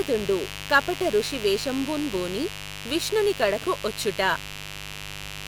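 A mains buzz runs through the whole clip, a steady raspy drone sitting only roughly 15 dB under the speech. Sharp switching spikes from the 50 Hz supply leak in twice per cycle, showing as evenly spaced clicks every 10 ms on the waveform and a dense comb of 50 Hz harmonics reaching into the kilohertz range on a spectrogram, well above the quieter room noise.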